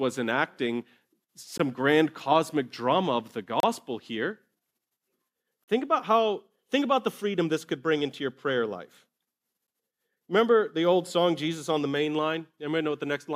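At 1.58 s, 3.60 to 3.63 s, 5.64 to 5.68 s and 9.67 s the speech cuts to silence with hard edges: a gap between stream segments. The holes last about 19, 31, 40 and 13 ms and fall near 2-second boundaries, because the segments' time stamps leave room that the player fills with silence. Unlike a dropout, nothing is missing: the speech resumes exactly where it stopped, only delayed.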